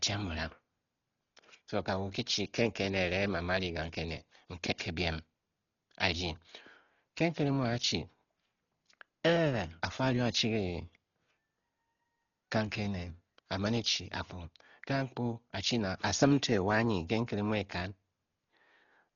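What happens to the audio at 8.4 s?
At 8.4 s the speech is passing through the same damage that runs through the whole clip, most likely Dolby Digital compression starved of bits. The encoder has cut the band so nothing survives above 7 kHz, and many frequency lines carry no detail, so the decoder fills them with dither noise. The result is dull, muffled speech with a rough, fluttering hiss around voiced tones, heavy enough to suggest a bitrate near 32 kbps.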